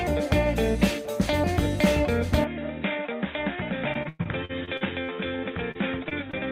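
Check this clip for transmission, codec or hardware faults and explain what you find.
Three kinds of fault are present.

From 2.44 s to the end, the sound turns dull and narrow, with nothing above 3.8 kHz. The level drops by about 5 dB and a new background noise appears, roughly 35 dB under the signal. There is no silence at the change. The likely cause is an input switched to a poorer device, whose narrower band and own noise replace the original path.

From 3.93 s to 5.10 s there is repeated packet loss, giving a robotic sound. Eight gaps remove 300 ms in total, the longest 104 ms. Each gap is patched by extending the last sound, so about a quarter of this stretch is synthetic and choppy.

Short concealed packet loss follows at 5.71 s, 6.09 s and 6.31 s, losing 40 ms, 20 ms and 20 ms. The receiver fills each hole by continuing the preceding sound, then blends back. Each is heard as a brief smear or wobble.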